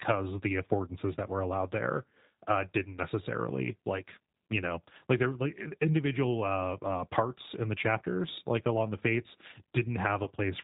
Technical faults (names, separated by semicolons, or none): G.729 codec; VoIP packet loss concealed by the speech codec